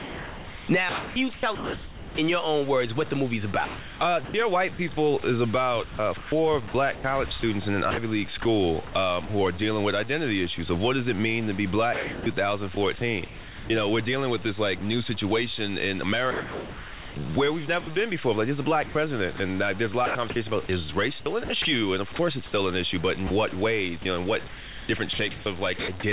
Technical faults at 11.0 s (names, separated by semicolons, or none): low bit depth without dither